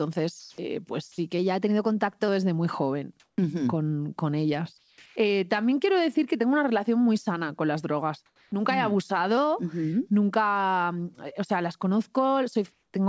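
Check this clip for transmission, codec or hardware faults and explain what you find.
Three kinds of fault turn up in this speech recording, all typical of a voice call. The call path behind them, whose band stops at 8 kHz, is consistent with G.722 at 64 kbps.

Comfort noise in place of the background occurs at 0.40 to 0.58 s, 3.20 to 3.38 s, 4.78 to 4.98 s, 5.06 to 5.16 s, 8.26 to 8.52 s and 12.72 to 12.94 s, lasting 100 to 260 ms each. In these pauses the real room background gives way to a smooth, detail-free hiss. The likely cause is discontinuous transmission: the sender goes quiet and the receiver synthesises noise roughly matched to the background. The level jumps by about 8 dB at 0.40 s and by smaller amounts elsewhere. Unlike a dropout, the gap is never truly silent.

Sound dropped by the voice detector occurs at 1.12 to 1.18 s. About 50 ms of actual speech disappears and is replaced by the same steady synthetic noise. 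The likely cause is the sender's detector misjudging a quiet stretch of speech as background and stopping transmission. This differs from packet-loss concealment, which smears or repeats the preceding sound. Here the speech is simply gone and flat noise takes its place until the detector reopens.

A drift correction step occurs at 1.39 to 2.28 s and again at 9.37 to 9.92 s. Playback runs 6.23% fast, lifting the pitch by about 105 cents, roughly a semitone, before snapping back. The likely cause is clock-matching software adjusting its buffer in a single step. Wow or flutter waver continuously. This shift is a flat plateau with abrupt edges, with speed and pitch moving together.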